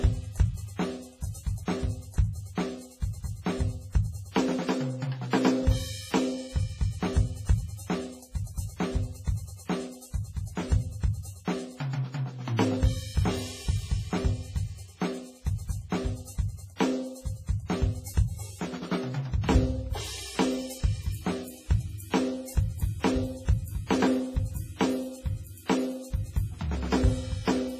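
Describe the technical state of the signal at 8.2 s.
At 8.2 s, as throughout, the music has heavy damage, likely from WMA compression: quantisation noise smeared over long blocks gives washy ringing and breathing hiss, with nothing above 15.3 kHz.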